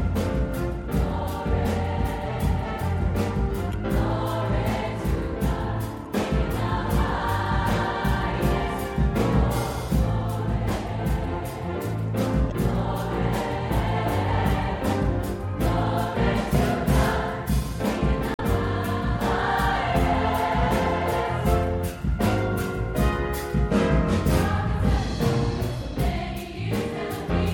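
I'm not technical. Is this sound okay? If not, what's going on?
No, there's damaged data in a compressed stream. Bits of the file got garbled, so the player briefly loses its place and blurts a short chirp or blip at 3.70–3.75 s, 6.02–6.08 s, 12.48–12.52 s and 18.33–18.40 s.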